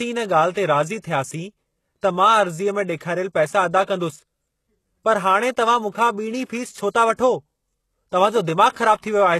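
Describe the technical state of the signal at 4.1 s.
HE-AAC compression is present at 4.1 s and throughout the speech, likely the cause of the gritty treble. The upper band sounds rebuilt from copied lower bands rather than coded, which fits a very low bitrate near 16 kbps, and nothing reaches above 12.3 kHz.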